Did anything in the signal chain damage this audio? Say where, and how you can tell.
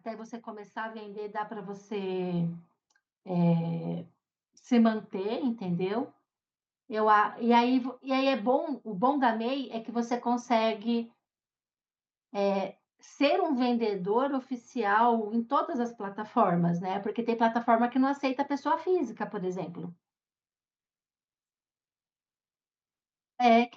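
Yes, at the call-processing stage: automatic gain rising from 0.05 to 5.88 s. Speech and background swell together by about 14 dB as the AGC slowly raises gain on quiet input.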